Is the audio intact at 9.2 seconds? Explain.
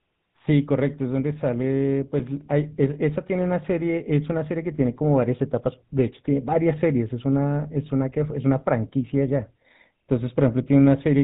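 No. At 9.2 s the speech is still going through the GSM full-rate codec, which runs for the whole clip. That codec models the vocal tract and drives it with a sparse pulse excitation, at 13 kbps, so the speech sounds buzzy and gravelly. Nothing above 4 kHz gets through. A plain low-pass or narrowband filter would only sound muffled, and the rough, pulsed grain is what marks this codec.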